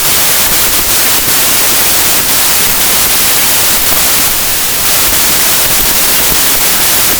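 From start to end, the speech suffers a wrong sample width fault. Packed 24-bit samples are being read as 32-bit integers, so most values splice bytes from neighbouring samples. The result is loud noise with the speech buried inside, running about 1.33 times fast and high in pitch.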